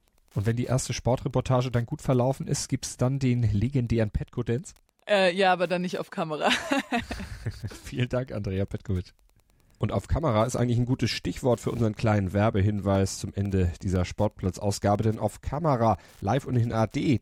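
A speech recording with two technical faults. Wi-Fi interference runs through the whole clip. A nearby Wi-Fi radio couples into the audio circuit, which rectifies its bursts. The beacon repeats every 102.4 ms, so a steady ticking sits under the speech at about ten ticks per second. Its level is roughly 40 dB below the speech. Periodic USB or driver dropouts appear from 12.95 s to 16.95 s. A background task blocks the USB bus or the audio driver at a fixed interval, here every 0.5 s. Each time, around a millisecond of audio is lost and replaced by silence. That gives roughly ten evenly spaced gaps. Each gap breaks the waveform, so it is heard as a regular tick or pop while the speech is sounding.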